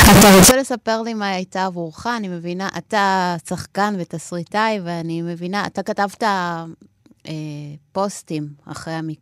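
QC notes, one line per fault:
0.0 to 0.51 s, float read as integer: the speech jumps to a harsh, blocky roar at an almost fixed, high level, with background noise as loud as the talking, though the pitch still carries. Likely 32-bit float samples being read as 32-bit integers.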